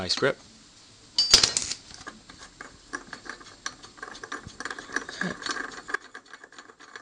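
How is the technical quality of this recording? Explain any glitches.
One glitch: at 5.95 s a sudden gain jump drops everything by about 12 dB until the end, likely an unramped digital gain step, since the background noise falls with it, instantly, unlike a fade.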